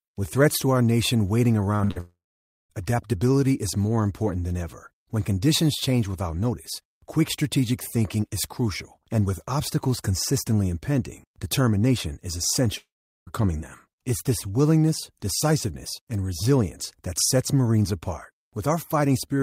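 Speech with a cluster of network faults early on. Just after "to our nation waiting", two short concealed packet losses at 1.75–1.81 s and 1.85–1.91 s smear the sound briefly, each filling about 40 ms of lost audio with continued sound. A burst of packet loss follows at 1.91–1.98 s, where 48 ms of concealment covers 40 ms of missing audio with a held, fading continuation. Two gaps at 2.00–2.72 s, ending before "adaptability is more important", and 12.78–13.29 s each start with a brief fading continuation, then go silent for roughly 0.5 s and 0.4 s. They most likely come from long network dropouts that lost about 0.7 s and 0.5 s of audio.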